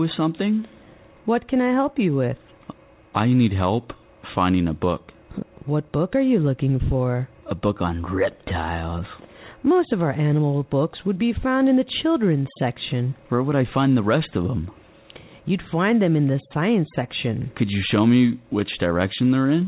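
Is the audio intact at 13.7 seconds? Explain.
Yes, the audio is intact at 13.7 seconds: nothing breaks up there, and the only thing audible is the call path's normal narrowband sound, with nothing above about 4 kHz, which fits a G.711 mu-law link at 64 kbps.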